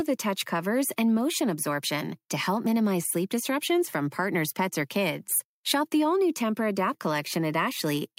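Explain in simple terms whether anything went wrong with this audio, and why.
Nothing went wrong with this recording that a listener can pick out. The speech comes across steadily, with no dropouts, glitches or sudden changes at any point.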